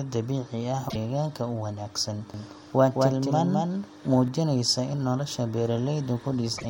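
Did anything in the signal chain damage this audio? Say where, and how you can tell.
Yes. Codec or storage stage. Twice, at 0.88 to 0.96 s just before "u wanaagsan", and at 6.57 to 6.65 s, the audio skips forward and garbles for about 80 ms, roughly three 26.1 ms frames. This is likely a broken MP3 bit reservoir. Frames were cut, so the following frames fetched borrowed data from the wrong bytes.

A doubled audio track runs from 2.34 to 4.28 s, right after "u wanaagsan". A second full-band copy trails by roughly 200 ms at about 5 dB lower. It has no decay or room colour, and it starts and stops abruptly. A second capture path or an edit likely mixed it in.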